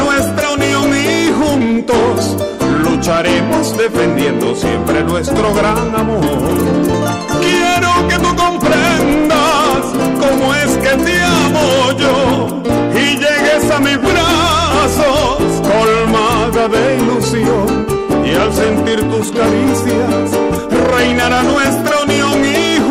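Hard clipping runs throughout, with about 14 dB of overdrive flattening roughly a sixth of samples; the abrupt flat tops give harsh fuzz, not soft saturation's rounded warmth.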